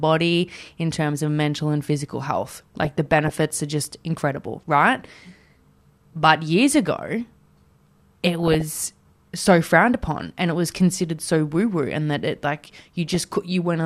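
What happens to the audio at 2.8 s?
At 2.8 s the speech is hit by DAB burbling. It runs from 2.45 s to 3.42 s, starting after "of mental and physical" and clearing before "are just incredible right". Weak reception lets bit errors, around half a percent, slip past error correction into the MP2 data. Corrupted samples put short blips of noise in single sub-bands, and corrupted scale factors make sub-bands jump in level for up to a frame. The result is a burbling of noise blips and level jumps over the speech.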